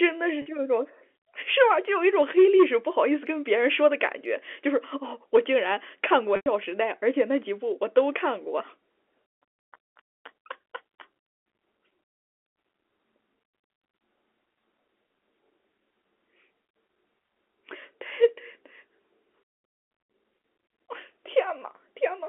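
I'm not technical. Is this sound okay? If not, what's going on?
No. Two moments have packet loss with pitch repetition. Sound went missing at 0.42 s and from 6.36 to 6.46 s. The receiver repeated the last bit of voice to cover each gap. The first sounds like a brief, buzzy hold. The longer second gap fades toward silence, then the speech blends back in.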